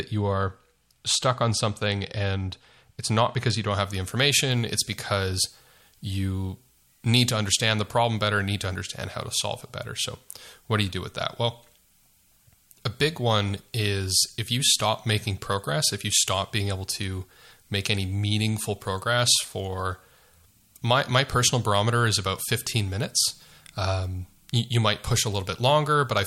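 From 3.7 s, just after "it's not because you", to the end, the speech turns thin, bright and hissy with sharp sibilants. This is pre-emphasis left on: the treble boost, consistent with a 50 µs FM curve, was never de-emphasised, leaving 10 kHz about 10 dB too strong.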